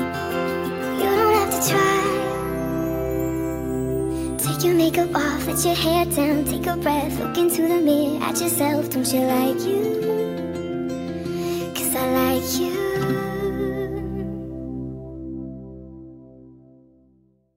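No technical faults can be heard anywhere in this clip.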